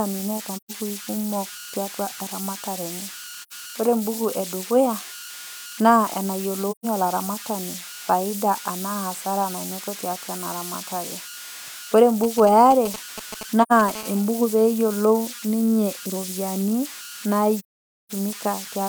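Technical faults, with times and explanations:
Throughout: converter idle tones. A whistle, somewhere around 1.5 kHz, sits in the pauses, with a grainy hiss under quieter speech, about 13 dB below the signal. An undithered delta-sigma converter is cycling through repeating bit patterns on small inputs, which produces these tones.
0.56–0.71 s, 3.42–3.53 s, 6.71–6.86 s, 13.62–13.72 s, 17.57–18.11 s: AAC frame loss with muting. The sound fades softly into a silent hole and back out. The first gap falls after "neata naa" and before "kumok tiatua eramatare enye", and the second follows "kumok tiatua eramatare enye". The holes last about 128 ms, 85 ms, 128 ms, 85 ms and 512 ms, which fits whole frames of roughly 43 ms. Lost frames were zeroed, and the overlapping windows smooth the edges.
12.24–13.90 s: GSM signalling bursts. A galloping dit-dit-dit of short rasps at 217 Hz cuts in at about 10 dB below the speech. 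A nearby 2G phone is sending brief groups of radio bursts while signalling, and the audio circuitry rectifies them.
13.95–14.87 s: GSM phone buzz. A steady, harsh 217 Hz buzz, rich in harmonics and unrelated to the speech, sits about 20 dB down. The nearby phone is now in a call, pulsing its transmitter 217 times a second, and these pulses are rectified into the audio path.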